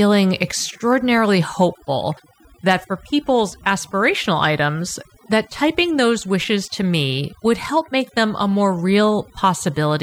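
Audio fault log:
Throughout: overdone noise removal. A noise reduction stage was pushed too hard on a noisy speech recording. It cuts individual frequency bands deep or mutes them outright whenever they sit close to its noise estimate, and the softer parts of the voice are taken along with the noise. The gaps drop to near silence dotted with twinkling specks. On a spectrogram the floor looks scrubbed black, broken by isolated flickering dots, and the voice harmonics appear ragged and patchy at their quiet edges.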